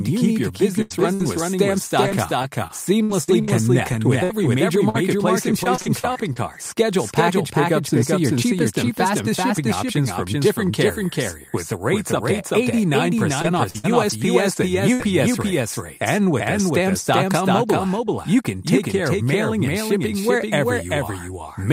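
A doubled audio track runs throughout. A full-strength copy trails by roughly 0.4 s, likely from a second, slower capture path.

Bursts of packet loss hit at 0.81 to 0.92 s and 1.14 to 1.21 s. The last sound is stretched and faded, and about 80 ms and 60 ms are missing.

Lost packets rebuilt from error correction sound rough and noisy at 0.90 to 0.92 s, 1.02 to 1.04 s and 1.19 to 1.21 s.

Repeated packet loss turns the sound choppy from 2.05 to 6.56 s, with 14 gaps. It returns from 13.42 to 15.01 s, with 5 gaps.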